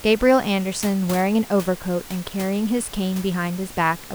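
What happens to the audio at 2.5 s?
At 2.5 s the speech is intact, with only the room's own background noise, about 18 dB below the speech, audible beneath it.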